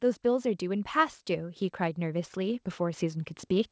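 From about 0.22 s to the end of the speech clip, the voice and background swell louder together, a fault of automatic gain rising: the gain control judged the input too quiet and kept raising its gain gradually. The call-path band limit near 8 kHz is audible throughout.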